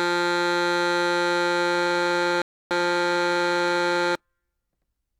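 A system hang loop runs in this music clip from 1.75 s to 4.15 s: a single 40 ms slice of audio repeats exactly, 53 times over, producing a rattling buzz at 25 Hz. The machine or its audio driver froze while the sound hardware kept replaying the same small ring buffer. A rebuffering stall cuts in from 2.42 s to 2.71 s, dropping to silence for about 0.29 s before the sound picks up exactly where it halted. The player exhausted its downloaded audio and waited for more to arrive, so nothing was skipped but that much time was inserted.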